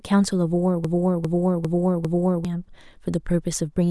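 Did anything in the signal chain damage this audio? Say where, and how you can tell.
Yes: a broken-record loop runs from 0.85 to 2.45 s, where one 0.4 s fragment of speech repeats exactly four times back to back. This most likely comes from a playback or stream buffer that stalled and kept resending its last chunk, so the speech meant for that span is lost.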